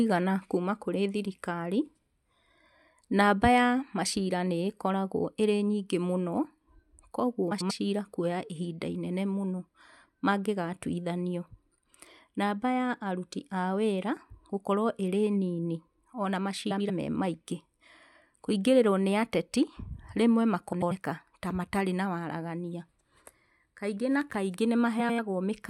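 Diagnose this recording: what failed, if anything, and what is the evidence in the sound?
The driver or buffer stage likely missed a deadline at 1.25 s, leaving a block of digital silence of about 2.7 ms where the output buffer went unfilled. The speech drops out hard and returns with no fade, so it is heard as a single tick.

At the network or codec stage, frames out of order were decoded at 7.51–7.71 s, 16.70–16.90 s just after "nini ona", 20.73–20.92 s just before "ta matarĩ na waragania", and 24.99–25.19 s. Each time, two adjacent 92.9 ms runs played swapped, which fits runs of about four frames, giving a garbled flutter but no lost time.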